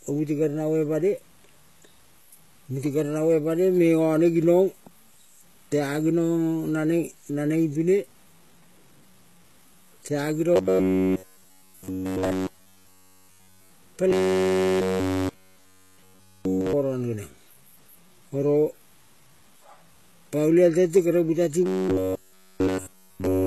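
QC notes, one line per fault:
Throughout: low bit depth without dither. Quiet passages turn gritty and the softest moments sputter, with the grain rising and falling with the speech and sitting roughly 35 dB below it. This is likely undithered 8-bit truncation. Unlike steady hiss, the error follows the signal.
Throughout: HE-AAC compression. Heavy codec damage, with nothing above 12.3 kHz. The upper band sounds rebuilt, and the sibilants are lispy and metallic, pointing to a very low bitrate, likely HE-AAC v2. Unlike plain lowpass dullness, the treble exists but is misaligned.
10.56–13.73 s, 14.11–16.73 s, 21.66–23.46 s: robotic sound from repeated short buffers. The speech becomes a rigid metallic buzz at 93.8 Hz, with essentially all of the real audio skipped. The buzz is likely one short block of about 10.7 ms looping. Unlike vocoder effects, the buzz rate is fixed regardless of the speech.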